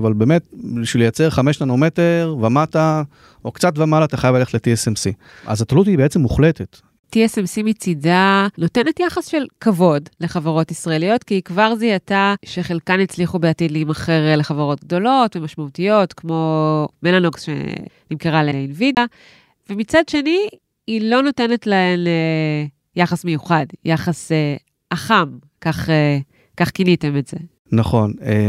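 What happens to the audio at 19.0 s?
A CD skip occurs from 18.95 to 18.97 s. The laser lost its track and landed on a different turn of the disc's spiral, so the player muted for about 20 ms, giving a brief tick, and the speech resumes from a displaced point.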